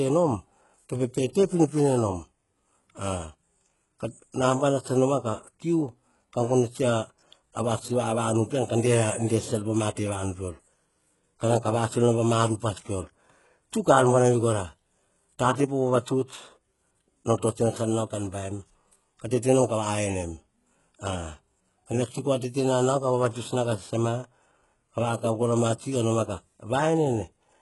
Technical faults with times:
0.00-27.61 HE-AAC compression

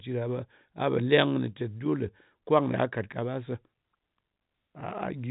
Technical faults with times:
none

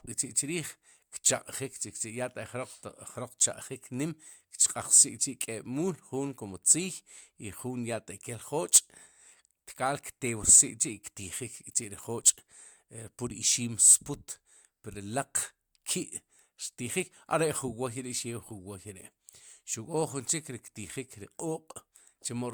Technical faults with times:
none

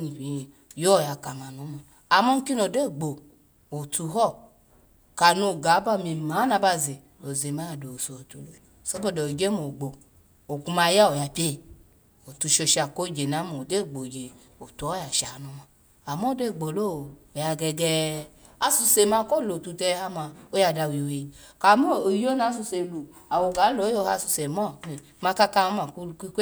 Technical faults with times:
8.65 audio missing between chunks
18.62 audio missing between chunks

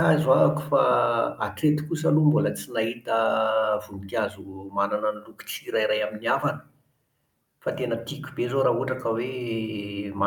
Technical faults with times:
none

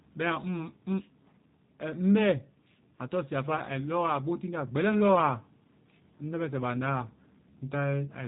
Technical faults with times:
0.00-8.28 G.729 codec

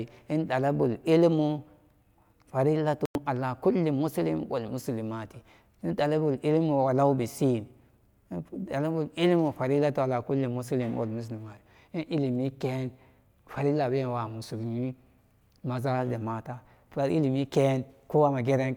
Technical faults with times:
3.05-3.15 digital broadcast dropout

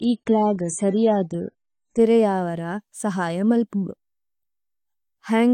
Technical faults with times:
0.00-2.00 adaptive stream starting at a low bitrate

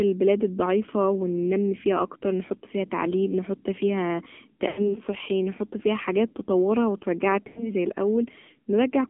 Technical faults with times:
0.00-9.10 AMR narrowband mobile codec
4.68-4.96 lost AMR speech frames
7.48-7.71 lost AMR speech frames

